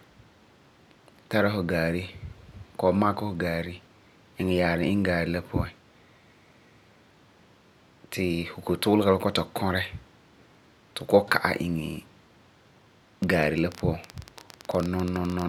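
A speech recording with a train of clicks from 13.24 to 15.43 s: around thirty similar pops at about 13.7 per second, irregularly spaced and about 10 dB above the speech. Their matching shape marks them apart from random crackle, likely interference or a faulty connection.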